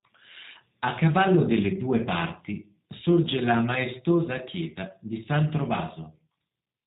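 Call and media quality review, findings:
G.729 codec, throughout, speech. Narrowband, nothing above 4 kHz; rough, slightly synthetic timbre with buzzy voicing, consistent with 8 kbit/s G.729A. Component: codec stage. Mechanism: speech rebuilt from a vocal tract filter, pitch predictor and sparse pulses per 10 ms frame. Unlike plain band-limiting, which only dulls the sound, this adds a synthetic grain on voiced sounds. Without dropouts or gaps, packet loss is not the cause.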